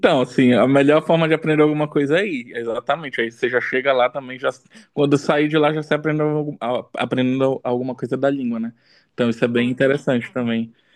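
Nothing in this speech recording stands out as a technical fault, so there's really nothing to flag here.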